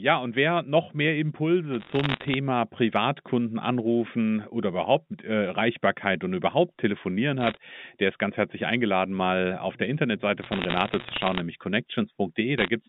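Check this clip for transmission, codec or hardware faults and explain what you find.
Bursts of bit errors on a digital phone line hit the audio at 1.74–2.34 s, 7.41–7.57 s, 10.42–11.40 s and 12.58–12.68 s. Flipped bits on the A-law line corrupt single samples, at rates around half to one percent, giving sharp ticks and crackle over the speech, which stays band-limited to about 150 Hz–3.6 kHz.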